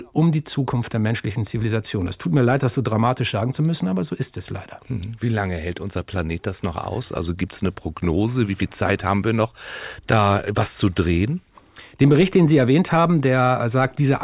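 No technical faults can be heard anywhere in the speech. At no point does anything break up, drop out or change in a way that points to a problem in the recording or playback chain.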